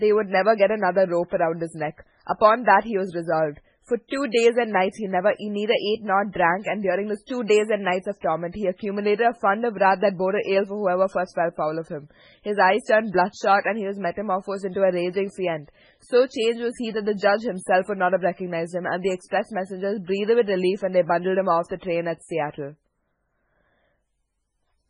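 MP3 compression throughout: the treble stops at 10.6 kHz and the speech sounds watery and swirly, likely from coding near 16 kbps switching weak frequency lines on and off.

Pre-echo at 4.08 to 4.12 s and 7.27 to 7.29 s: block-spread coding noise leaks 35 ms and 22 ms ahead of sharp attacks as short hiss, smearing them.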